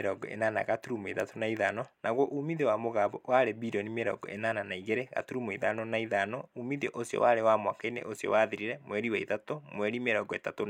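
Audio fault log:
No audible faults found in this speech clip.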